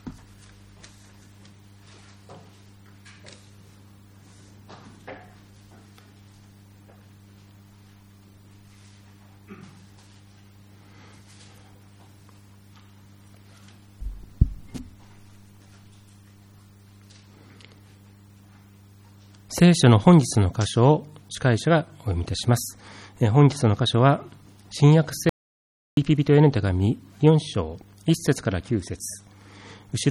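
The input feed was likely lost for a moment, through a dropped connection or a brief mute, while writing continued with silence: an audio dropout to silence from 25.29 to 25.97 s. The sound cuts off abruptly into total silence, with no room tone, and resumes mid-flow after about 0.68 s.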